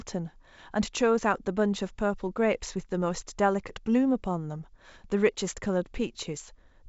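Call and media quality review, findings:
No faults found in clip.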